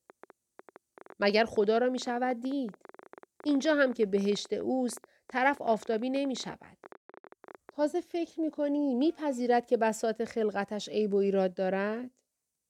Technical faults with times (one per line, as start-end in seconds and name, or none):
0.10-7.70 train of clicks